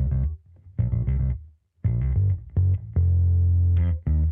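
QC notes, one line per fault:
No faults found on listening.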